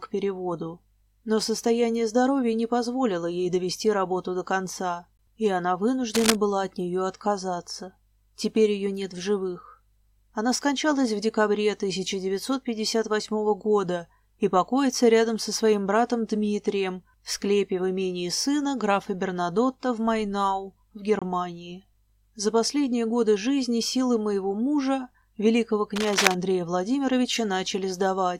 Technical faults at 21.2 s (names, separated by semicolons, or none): gap between stream segments